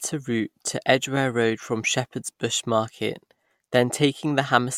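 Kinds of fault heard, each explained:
No kinds of fault are heard in this clip.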